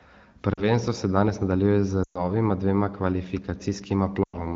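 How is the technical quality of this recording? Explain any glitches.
The recording is clear wideband speech with three brief glitches from lost AMR speech frames. The wideband quality points to AMR-WB at around 12.65 kbit/s.

Lost AMR speech frames occur at 0.53 to 0.64 s (just before "se danes nadaljuje z", about 40 ms lost, which fits two frames), at 2.03 to 2.27 s (right after "se danes nadaljuje z", about 120 ms), and at 4.24 to 4.46 s (about 100 ms). When a frame is corrupted, the decoder carries the last good pitch and vocal tract settings forward while lowering the gain. The longer two drop to near silence within two frames, and the voice returns rough for a moment. Unlike a hard dropout, there is no abrupt cut or click.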